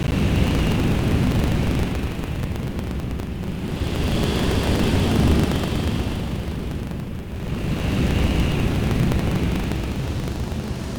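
A steady robotic rattle at 25 Hz runs through the whole clip whenever sound is present. This is buffer tearing: writer and reader have slipped, so roughly a fifth of each 40 ms period replays audio about a tenth of a second old, hard-spliced in.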